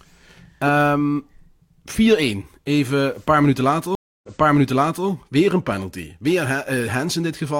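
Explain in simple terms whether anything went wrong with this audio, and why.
The connection to the stream dropped and the player had to reconnect, which is a stream reconnect. Right after "een paar minuten", at about 3.95 s, the player went quiet for roughly 0.28 s while it reconnected and restarted its decoder partway through the stream. The server then resent a chunk it had already sent, so the speech picks up about 0.84 s earlier than where it stopped and that short stretch is heard twice. The disruption runs until about 5.07 s.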